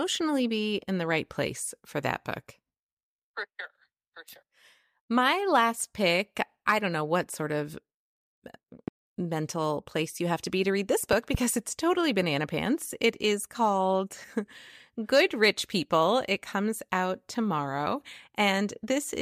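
A loud pop at 8.88–8.90 s, before "mental place you have", peaks about 10 dB over the speech. A double pop at 11.13–11.37 s, after "be to read this", reaches about 15 dB, likely from a voltage transient.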